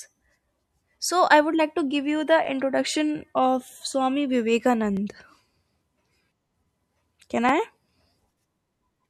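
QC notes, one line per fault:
2.45–2.47, 4.97–4.99 and 7.49–7.51 s: overlapping chunks. Each 2.5 s chunk replays about 21 ms, causing a stutter-click; the waveform shows a repeated segment with a vertical spectrogram stripe.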